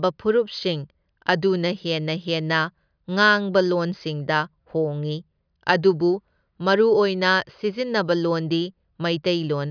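No technical faults can be heard anywhere in this speech recording. Nothing interrupts or alters the sound at any point in it.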